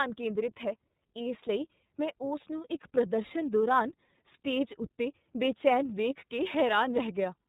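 From start to finish the speech passes through the iLBC codec. Nothing above 3.8 kHz survives, and each frame's excitation is coded on its own. That leaves a plainly audible rough, synthetic edge, consistent with 30 ms frames at 13.33 kbps, unlike the smeared, watery swirl of transform codecs.

Sample clock jitter also runs throughout. With timing wandering by around a microsecond or two, a faint hiss sits roughly 45 dB below the signal. It thickens on loud, bright sounds and disappears in pauses, which separates it from steady background noise.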